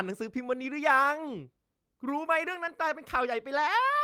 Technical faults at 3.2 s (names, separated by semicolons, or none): lost packet rebuilt from error correction